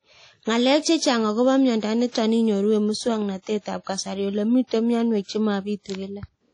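Throughout this speech clip the sound is washy and ringing, with a hiss that swells and fades along with the voice and nothing at all above 10.1 kHz, so the top end is dull and the detail sounds smeared. That points to likely WMA compression: a transform codec working in long blocks spreads its quantisation noise over tens of milliseconds and throws away faint spectral lines, and damage this plainly audible fits a low bitrate of around 32 kbps. From 2.09 to 2.15 s a sharp onset is preceded by a short burst of hiss about 57 ms long, and the attack itself sounds softened. This is pre-echo. The codec spread the noise it allowed for the loud onset across the whole block, so that noise also filled the quiet stretch just before the attack.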